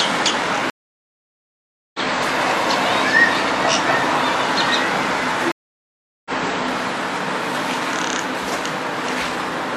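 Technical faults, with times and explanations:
0.70–2.00 s and 5.52–6.31 s, stream reconnect: the connection dropped, leaving 1.24 s then 0.74 s of silence, and a fresh decoder resumed mid-stream about a second, then half a second, later. The waveform flatlines and the spectrogram shows full-band blank columns.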